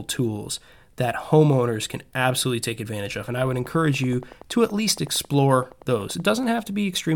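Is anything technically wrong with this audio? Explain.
Yes, there's a train of clicks from 3.28 to 6.31 s: around thirty evenly spaced pops at 10.6 per second, peaking about as loud as the speech. Likely interference from nearby gear or a faulty connection or power supply injecting pulses, heard as steady ticking over the speech and through its pauses.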